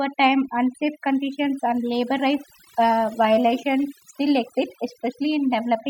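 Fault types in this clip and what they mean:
overdone noise removal: The background between phrases drops to near silence dotted with twinkling specks. A noise reducer set far too strong is shutting down individual frequency bands it judges close to the noise floor, taking quieter parts of the voice with them.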